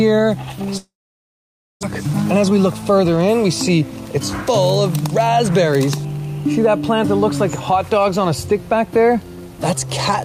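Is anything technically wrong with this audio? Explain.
Yes, there are two faults.

From 0.77 to 1.85 s there is a long network dropout, likely. The last sound trails off, then about 0.9 s of silence. Roughly 1 s never returns.

From 2.43 to 3.05 s there is a jitter buffer speed-up. Short pitch-period slices, about 40 ms in all, are cut. The audio runs at 106% speed, hurried but unchanged in pitch.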